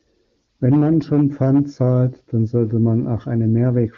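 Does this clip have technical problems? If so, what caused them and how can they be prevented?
No, no technical faults heard.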